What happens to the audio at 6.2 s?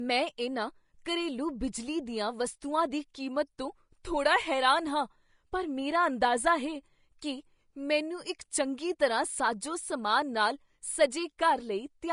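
At 6.20 s the codec spread quantisation noise across a block in which a sharp attack arrived late, so a pre-echo of hiss about 11 ms long leaks in just before the onset and smears it. This rides on the likely Vorbis compression, at a low bitrate consistent with about 34 kbps, that cuts everything above 10.6 kHz and leaves the sound plainly grainy and hissy.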